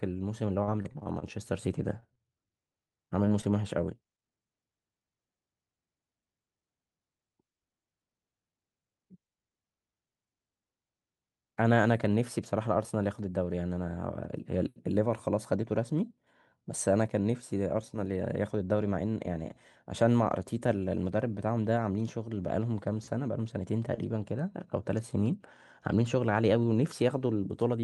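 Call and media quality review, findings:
Repeated packet loss (robotic sound), 0.63–1.24 s and 2.73–3.45 s: choppy speech from jitter buffer/PLC. Six gaps in the first stretch (longest 39 ms), five shorter gaps in the second. Spectrogram shows smeared harmonic stretches.

Short stall from a late packet, 2.00–2.04 s: jitter buffer underrun, last sound held about 17 ms. Waveform shows a brief repeated cycle, nothing missing.

Short concealed packet loss, 2.14–2.18 s: about 20 ms lost, PLC-extended, then crossfaded back. Spectrogram shows a small blurred patch.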